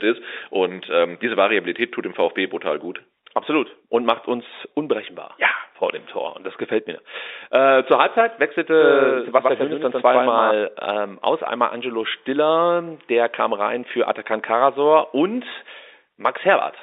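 From 8.73 s to 10.51 s, just before "ähm aus", the speech carries a doubled audio track: a second, full-band copy trails the original by about a tenth of a second, roughly 5 dB quieter, with no reverberant tail or room colouring. It sounds like a hard slapback echo that switches on and off abruptly at those edges. The likely cause is a second capture path or an edit leaving two copies out of step. Both copies share the same telephone-band G.711 character.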